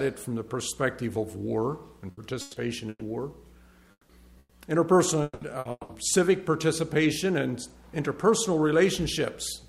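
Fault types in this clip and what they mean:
Burst of packet loss: at 2.11, 2.41, 2.89, 4.39 and 5.59 s, runs of lost packets leave gaps of 60 to 120 ms. The receiver stretches the last sound into a fading buzz or hiss, sometimes ending in about 30 ms of silence, before the audio resumes further on.
Long network dropout: at 3.91, 5.23 and 5.71 s, each gap is about 0.2 s, likely from a dropout in the network. The last sound is held and fades for 180 ms, then 30 to 60 ms of silence follows before the audio returns, missing that stretch.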